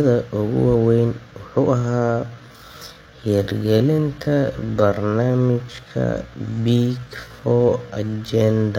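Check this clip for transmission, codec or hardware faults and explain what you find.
One fault appears in this speech clip. Time-stretched section, 1.76 s to the end: the speech abruptly slows to about 0.59 times its original pace while keeping its pitch, likely from software stretching the audio to a target length by repeating short pieces. The result sounds dragging.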